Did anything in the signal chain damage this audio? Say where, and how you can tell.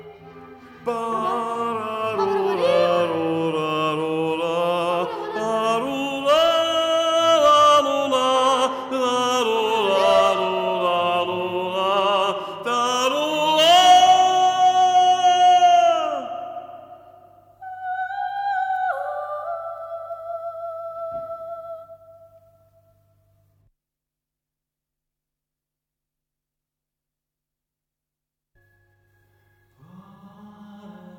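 No, no signal-chain damage heard.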